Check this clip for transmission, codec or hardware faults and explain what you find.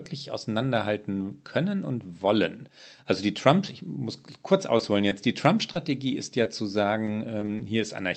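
The speech shows two packet-loss problems on the call path: four isolated dropouts and one choppy stretch near the end. The Opus-coded audio stops at about 8 kHz.

Short concealed packet loss at 4.77–4.81 s, just after "ich muss kurz", and again at 5.09–5.13 s, 5.73–5.77 s and 6.43–6.47 s. About 20 ms of audio arrived too late each time. The decoder extended the preceding sound and crossfaded back, which leaves a brief smear or wobble.

Repeated packet loss (robotic sound) from 7.05 to 7.61 s. Four gaps, none longer than 20 ms, recur in quick succession. Each is patched from the last sound before the next one arrives, so roughly a seventh of that stretch is synthesised, giving a choppy quality with pieces missing.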